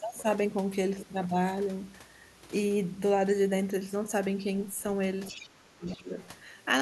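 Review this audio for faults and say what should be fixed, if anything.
Near the end of the speech, the other side's voice leaks through in three short scraps: 5.26 to 5.49 s, 5.88 to 6.03 s, and 6.19 to 6.28 s. They sit well under the talker, about 20 dB down for the first two and about 25 dB down for the last. The likely cause is the far end playing on the talker's loudspeaker and the echo canceller leaving some of it in the mic signal. To prevent it, get the talker on a headset, or tune the canceller so it adapts faster and suppresses residual echo more firmly.

Overlapping that, from 5.31 to 6.08 s, the talker's speech is suppressed in double talk. Their level drops in pieces by as much as about 25 dB, adding up to roughly half a second of lost or thinned speech. Both sides were talking at once here, and the canceller likely couldn't tell the talker apart from the echo, so it ducked everything. 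To prevent it, use a canceller with better double-talk detection that holds back suppression while the near-end talker is active.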